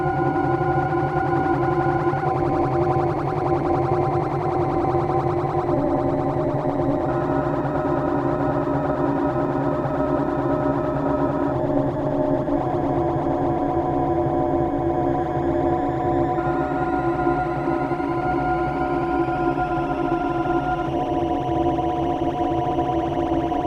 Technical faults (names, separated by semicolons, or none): corrupt frame decoded